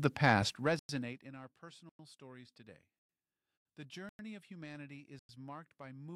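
Hard-edged 100 ms silences open at 0.79 s after "the past", 1.89 s before "stories today", 4.09 s before "of humanity" and 5.19 s. This is a gap between chunks: silence is left between 1.0 s chunks. Unlike a dropout, no sound is lost. It simply pauses and resumes intact.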